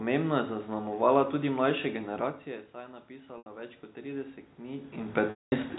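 From 3.08 to 5.66 s, automatic gain rising: the input dropped by about 15 dB and the gain control climbed about 10 dB, so speech and background swell slowly together. Within that, packet loss with pitch repetition at 3.38 s (80 ms) and 5.30 s (220 ms). The receiver bridged each gap by repeating the last pitch period, giving a brief buzzy hold, with the longer gap fading to silence before speech cross-fades back.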